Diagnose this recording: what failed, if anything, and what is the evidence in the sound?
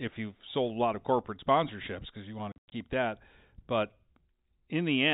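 The failure is in the network stage: packet loss filled with silence. Between 2.52 and 2.72 s the speech drops out in several hard-edged holes. They remove about 160 ms of audio spread over 200 ms, and the longest single gap lasts 100 ms. Each hole starts and ends abruptly. The gap lengths point to roughly eight lost 20 ms packets. The receiver played silence in their place instead of concealing them. The G.711 telephone coding shows only its expected 4 kHz bandwidth limit.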